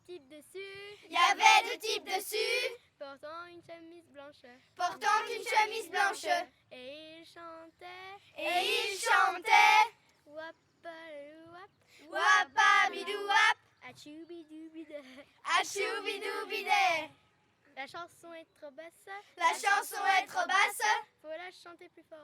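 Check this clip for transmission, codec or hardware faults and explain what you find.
Checking this clip turns up no faults to explain.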